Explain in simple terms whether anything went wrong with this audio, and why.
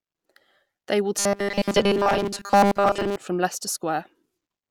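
From 1.19 to 3.16 s the voice turns into a stiff, metallic buzz at about 200 Hz. This is robotic sound from repeated short buffers: audio likely arrived too slowly, so tiny 5 ms slices were replayed over and over while most real speech was skipped.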